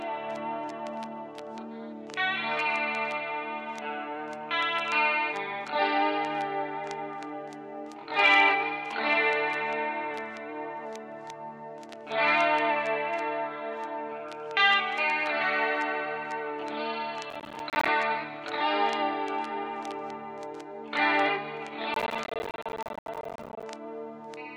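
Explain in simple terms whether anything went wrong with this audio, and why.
Processor overload crackle appears from 17.30 to 17.88 s and again, longer, from 21.94 to 23.63 s. The processor fell behind and kept missing its deadlines for tiny chunks of roughly 10 ms each. Every missed chunk left a brief silent gap with hard edges, and about 20, then about 100, of these in a row sound like gritty crackling.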